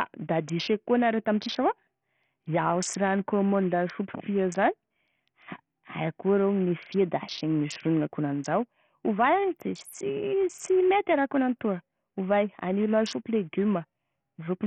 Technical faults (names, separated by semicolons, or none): Bluetooth SBC compression